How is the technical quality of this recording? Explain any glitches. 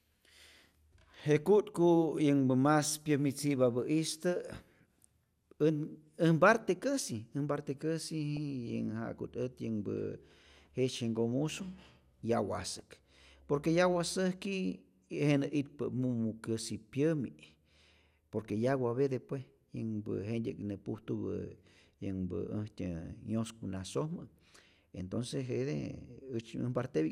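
The recording has two bursts of DAB burbling, a brief one at 8.37 s and a longer one from 12.64 to 13.42 s. Under weak reception, a bit error rate of roughly 0.15 to 0.2 percent let corrupted MP2 data through error correction, so wrong samples put short blips of noise into single sub-bands and wrong scale factors throw individual sub-bands up or down in level for up to a frame. Over the speech this gives a bubbling, squelchy chirp, a tiny blip at 8.37 s and a sustained gurgle across the later stretch, which fits a few dozen damaged frames.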